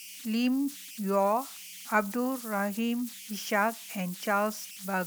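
Converter idle tones run through the whole clip. A whistle sits at around 3 kHz, roughly 16 dB below the speech, rising out of the pauses and turning into a grainy hiss under the speech. The cause lies in a delta-sigma converter working without dither. When its input is small, the modulator locks into repeating bit patterns, and those cycles come out as a steady tone whose pitch follows the small offset present at the input.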